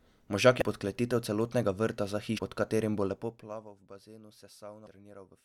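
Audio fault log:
0.61 s, 2.37–2.39 s, 4.86–4.88 s: damaged data in a compressed stream. Each is a short chirp or blip. The first falls just before "podkletitev celotnega vrta za", the second just after it. The decoder misreads corrupted frames, loses sync and hunts for the next frame header.
3.04–3.72 s: zipper noise. The level falls by about 20 dB in 1 dB steps, around 50 per second. No smoothing is applied between steps. Each step leaves a tiny click, so a fine ticking rides on the speech during the fade.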